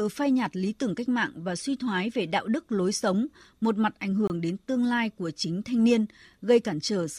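At 4.27 s, between "sống một mặt ảnh" and "đến tương lai của", there is a gap between stream segments. The timestamps of two adjacent segments fail to meet, leaving 25 ms with no audio, which the player fills with silence. It sounds like a brief, hard-edged dropout in the speech, though nothing is lost. The waveform drops abruptly to a flat line until 4.30 s, and the spectrogram shows a narrow, empty vertical stripe across all frequencies with sharp edges.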